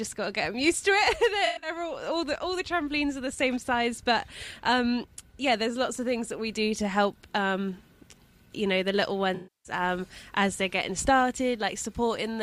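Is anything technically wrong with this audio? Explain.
Yes. At 1.45–1.70 s and 9.35–9.72 s, AAC frame loss with concealment occurs. The decoder patched missing frames from the last good spectrum. The first patch is about 150 ms of loss in short runs and sounds smeared and noisy. The second, a 300 ms loss, decays toward silence and fades back in.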